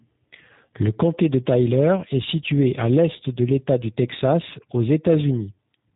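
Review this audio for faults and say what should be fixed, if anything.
Speech across the whole clip passed through a G.729 codec. Each 10 ms frame is rebuilt from a vocal tract filter, a pitch predictor and a few pulses, which fits an 8 kbit/s stream. The result is plainly rough and synthetic, with nothing above 3.8 kHz. To prevent it, carry the call on a wideband or higher-bitrate codec end to end.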